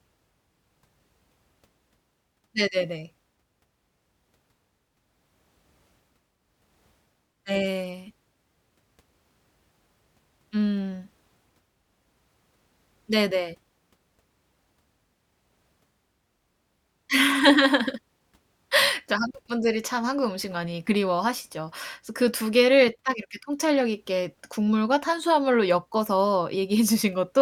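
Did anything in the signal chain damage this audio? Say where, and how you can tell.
Yes, at the codec stage. Compressed frames were skipped at 20.87–20.90 s. The speech jumps ahead about 40 ms, which fits two 20 ms frames.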